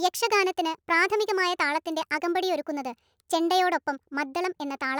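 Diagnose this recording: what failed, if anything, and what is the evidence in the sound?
The speech runs fast and high from start to finish, about 1.38 times normal speed and roughly 5.55 semitones sharp. This is a wrong sample rate fault at the playback stage. The ratio fits 32 kHz material played at 44.1 kHz without resampling.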